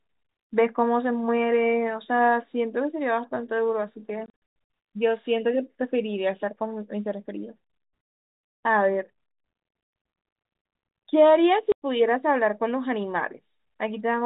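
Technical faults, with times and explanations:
4.26 to 4.42 s, packet loss filled with silence: packets went missing and the receiver played silence in their place, totalling 280 ms of gaps scattered over about 440 ms, the longest run 100 ms. The holes fit 20 ms packets, with hard edges against the narrowband telephone sound.
11.72 to 11.82 s, packet loss filled with silence: a single 100 ms burst of lost packets is replaced by digital silence, again consistent with 20 ms packets, so the sound stops dead and resumes abruptly.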